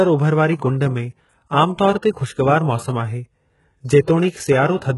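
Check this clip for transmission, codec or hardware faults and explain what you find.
One fault runs through the whole speech clip.

HE-AAC compression, throughout: the damage points to a very low bitrate, around 12 kbps, where only the lower spectrum is coded and the treble is likely rebuilt by copying lower bands upward. The top stops at 11.5 kHz, and sibilants sound heavily gritty, metallic and lispy.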